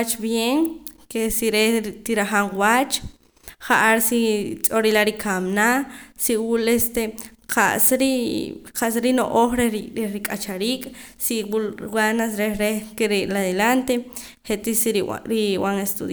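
Nothing goes wrong anywhere in this speech recording, so there's no technical fault to point to at any moment.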